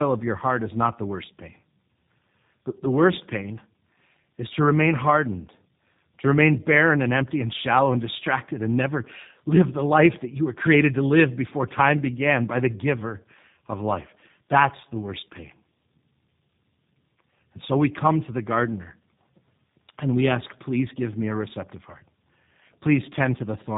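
Throughout the speech, the sound is rough, muffled and warbly, with nothing above about 3.8 kHz. This is tandem speech coding: the call appears to have passed through two low-rate speech codecs in a row, consistent with an AMR-NB link handing over to a G.729A link with plain telephone-band coding between them. The second coder re-encoded the first one's already degraded output, so their distortions stacked.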